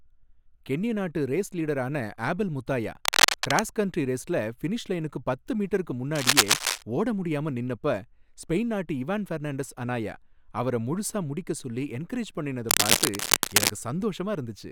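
Three bursts of cable scratch noise cut across the speech, at 3.05 to 3.62 s, 6.15 to 6.82 s, and a longer one from 12.69 to 13.71 s. Each is a dense, ragged rustle sitting a few dB above the speech itself, so it briefly masks it. The likely cause is a worn cable or connector being moved, its contact resistance jumping around quickly enough to spray uneven noise into the signal.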